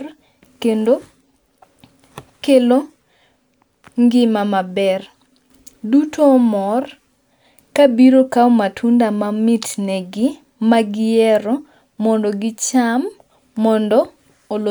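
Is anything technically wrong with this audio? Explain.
No, nothing in this speech recording stood out as a technical problem on listening.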